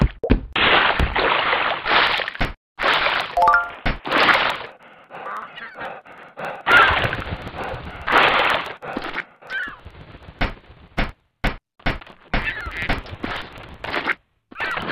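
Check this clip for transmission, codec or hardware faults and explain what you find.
Two faults are present: a steady train of periodic USB or driver dropouts, and three short bursts of DAB burbling.

From 2.07 s to 14.82 s, periodic USB or driver dropouts recur every 0.054 s, roughly eighteen times a second, some two hundred in all. Each time, something on the USB bus or in the audio driver stalls. Around 10 ms of audio is skipped outright rather than filled with silence, so the waveform jumps and clicks. They come across as an even, rhythmic ticking present only while sound is playing. That strict clockwork regularity separates them from random packet loss or dust-like crackle.

DAB burbling appears at 4.37–4.55 s, 8.34–8.54 s and 11.82–11.91 s. Weak reception let a few bit errors in every thousand slip past error correction into the MP2 stream. The corrupted samples put short blips of noise in single sub-bands, and corrupted scale factors make sub-bands jump in level for up to a frame, and the bursts point to runs of damaged frames. 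The result is short blips of noise over the audio. Unlike the dropouts, it warps the tone within bands instead of cutting time out, and it comes in isolated patches rather than on a fixed beat.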